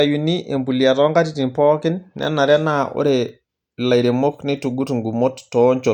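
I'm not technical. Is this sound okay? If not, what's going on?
Yes, this recording of speech sounds fine, with nothing going wrong anywhere in it.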